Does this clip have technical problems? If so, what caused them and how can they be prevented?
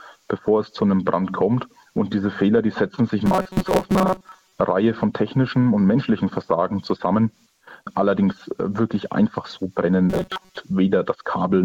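Yes. From 3.26 to 4.52 s and again from 10.10 to 10.57 s, the sound becomes a rigid, metallic buzz locked at 188 Hz: robotic sound from repeated short buffers. New audio was likely arriving too seldom, so playback looped a fragment of about 5.3 ms and skipped most of the real signal. Keeping the audio thread fed, with larger buffers or higher scheduling priority, prevents this.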